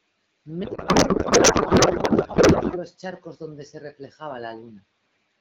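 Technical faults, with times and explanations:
0.63 to 2.79 s, codec payload misread: the speech turns into garbled, warbling noise that barely tracks it, which fits the AMR decoder reading octet-aligned frames as bandwidth-efficient, so every field comes from the wrong bits. Unlike packet loss, nothing drops out; it stops abruptly once the packing matches.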